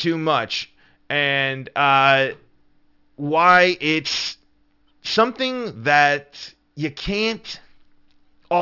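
Aliasing runs through the whole of the speech. The spectrum stops hard at 6 kHz, which points to the sample rate being cut to about 12 kHz without an anti-aliasing filter first. Content that lay above 6 kHz was not removed but folded back down below it, landing at unrelated frequencies about 15 dB under the speech. Sibilants come out gritty and metallic, with a harsh, inharmonic edge crowding the top of the band.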